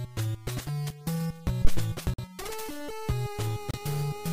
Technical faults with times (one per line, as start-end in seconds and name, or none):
1.65-1.89 phantom power thump
2.14-2.24 Bluetooth stall
3.71-3.80 Bluetooth stall